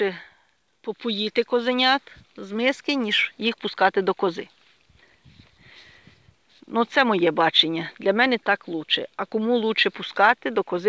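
Nothing technically wrong can be heard in the audio, which has passed through a call path with nothing above 8 kHz, as fits a G.722 call codec at 64 kbps.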